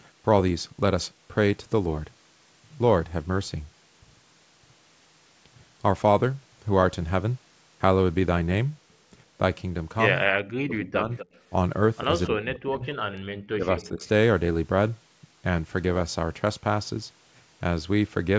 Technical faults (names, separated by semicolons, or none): speech suppressed in double talk; echo leak